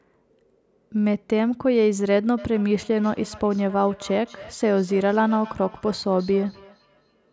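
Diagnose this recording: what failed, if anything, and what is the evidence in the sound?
From 2.38 s to the end of the clip, the speech comes back as a faint, thin, ringing copy about a third of a second behind itself, peaking about 20 dB below the direct sound. This is feedback echo between two devices, a failure at the call-processing stage. A second device in the same room plays this speech aloud, and the microphone picks it up again. Each device's echo canceller removes only what that device itself plays, so this returning copy passes through.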